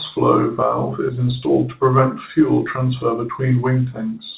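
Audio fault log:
No faults heard.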